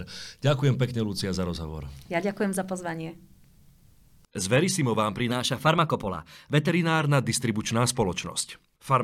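From 5.31 to 6.69 s, a wrong sample rate fault: for those 1.38 s the samples are clocked out faster than they were captured, with no rate conversion, which fits 44.1 kHz audio played at 48 kHz. Because speed and pitch are tied to the same clock, the speech runs about 1.09 times faster and rises by about 1.5 semitones, so the voice briefly sounds quicker and higher before returning to normal.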